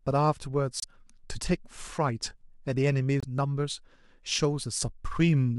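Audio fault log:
0.80 to 0.84 s and 3.20 to 3.25 s, broken MP3 bit reservoir: the speech jumps ahead, and each jump leaves a disturbance of about 45 ms. That length matches roughly two 26 ms MP3 frames. The likely cause is missing frames: MP3 frames keep some of their data in earlier frames, and after a cut the decoder reaches back into the wrong frame's bytes, so the first frames after each gap decode into rubbish.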